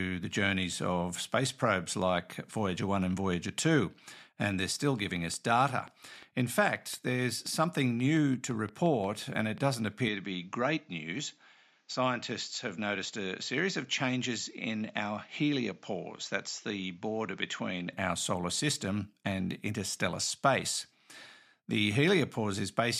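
A speech clip with two separate faults. From 4.64 to 9.75 s, something is likely injecting a repeating pulse into the signal path, such as interference from nearby equipment or a faulty connection or power supply. The result is a train of clicks at a steady 5.68 per second, roughly thirty in all, each about as loud as the speech itself, and the ticking carries on through the pauses. At 10.08 s the recording's input was likely switched to a poorer device, with no gap at the changeover. Until 17.93 s the audio goes dull and boxy because nothing gets through above 7.6 kHz. The level also drops by around 5 dB, and a new background noise sits roughly 40 dB under the speech. After that the fuller, brighter sound returns.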